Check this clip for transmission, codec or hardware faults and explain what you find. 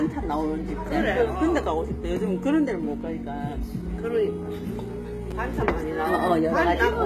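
Two faults are audible: a gritty, synthetic-sounding treble throughout and a brief jumbled moment near the end.

Throughout the clip, the top end sounds metallic and grainy, and nothing comes through above 14.9 kHz. The likely cause is HE-AAC compression at a very low bitrate, around 20 kbps. Only the lower spectrum is coded, and the treble is rebuilt by copying lower bands upward, so its harmonics don't match the real ones.

At 5.31 s there is a tiny garbled moment. This is chunks out of order: a slice of about 5.33 ms played one slot late, after the audio that should follow it. Nothing is lost, but the reordering leaves hard joins.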